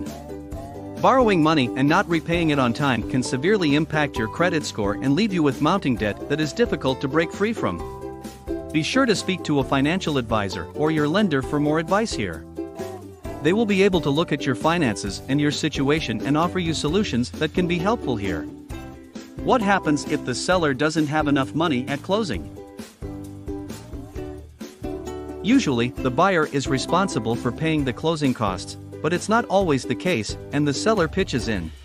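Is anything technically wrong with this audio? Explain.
No, nothing is technically wrong with this audio.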